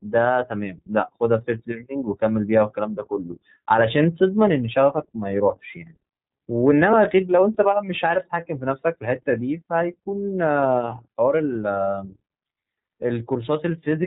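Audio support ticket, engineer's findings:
iLBC codec on the call path, whole clip. Narrowband coder, each 30 ms frame's excitation coded independently of the previous one; character fits the 13.33 kbps mode. Symptom: hard ceiling near 3.8 kHz, sibilants dulled, plainly audible codec damage. Speech stays clear but sounds rough, slightly synthetic.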